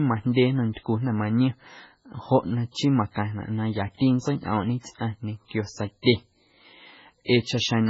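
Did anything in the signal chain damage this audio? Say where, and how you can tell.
Yes, at the codec stage, and it runs the whole way through this speech. Nothing comes through above 7.6 kHz, and the sound is heavily watery and swirly, which fits a very low bitrate around 16 kbps. Likely MP3 compression starving the encoder and dropping weak frequency lines frame to frame.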